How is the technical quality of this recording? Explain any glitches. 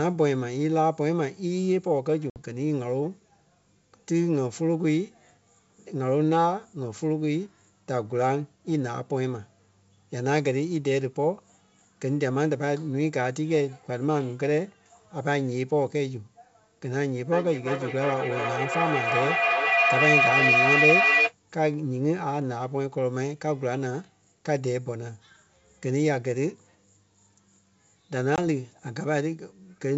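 The speech is a wideband call with two short dropouts and a stretch of feedback howl in the middle. The call sound itself is clean and wideband, which fits G.722 at 64 kbit/s.

Packet loss on an ADPCM call, at 2.30 to 2.38 s and 28.36 to 28.39 s: there's a hard-edged hole of about 60 ms, then about 20 ms, which fits roughly three packets and then one lost. The gap is filled with silence, and the decoder's predictor and step size drift away from the sender's. When the speech comes back it briefly sounds rough before settling.

Feedback howl, from 17.3 to 21.4 s: two devices in the same room are on the call, so the sound loops from loudspeaker into microphone, gaining a bit on every pass. It narrows to a whistle around 3 kHz, with the loop repeating roughly every 400 ms, and peaks about 4 dB above the speech before the loop is broken.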